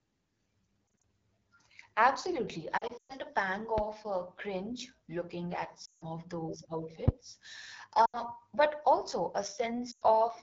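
The whole clip runs through the AMR wideband (HD Voice) codec at 8.85 kbit/s, a low rate that leaves the speech plainly rough and raspy. Lost AMR speech frames hit at 0.94–1.02 s, 2.77–3.12 s, 5.85–6.04 s (between "uh cringe looking at" and "of those"), 8.05–8.21 s (before "but also") and 9.91–10.03 s. Each time, the decoder recycles its last good pitch and vocal tract settings at falling gain, so you get brief warbles, and around 3 s a stretch that drops to near silence. Loud pops land at 3.78–3.81 s and 7.08–7.10 s (right after "of those"), sharp clicks about 15 and 20 dB above the speech, likely from voltage spikes such as a switch, static or a driver glitch.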